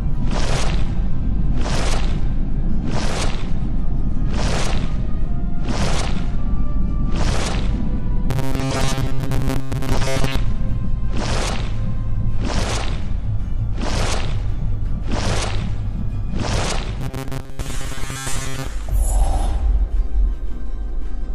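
Robotic sound from repeated short buffers occurs twice in this audio, from 8.31 to 10.36 s and from 17.01 to 18.67 s, heard as a rigid, metallic buzz pitched at 134 Hz. The likely cause is audio arriving too seldom, so playback fills each gap by looping its last fragment of roughly 7.5 ms while most of the real signal is skipped. That constant loop period fixes the buzz at one over its length.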